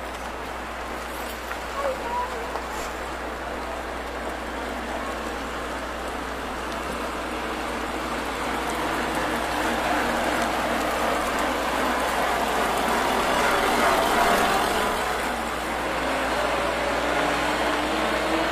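A 60 Hz mains hum runs under the whole thing, a steady low drone sitting only about 15 dB below the sound. That's the power line leaking in, most plausibly through a ground loop or a transformer close to the gear.

Then there are two compressed frames skipped events. At 2.70 to 2.74 s the audio hops ahead by roughly 50 ms, and at 12.64 to 12.67 s by about 100 ms. The jumps fit one and then two lost frames of about 46 ms.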